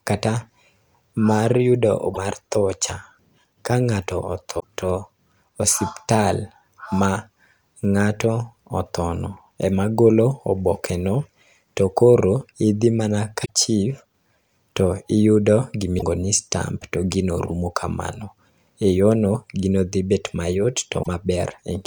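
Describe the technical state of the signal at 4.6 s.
At 4.6 s the signal carries damaged data in a compressed stream, spanning 4.56 to 4.64 s, about 80 ms. Corrupted bytes make the decoder misread the frames there and lose sync until it finds the next valid frame header, so the speech is broken by a brief chirp, squawk, click or short hole.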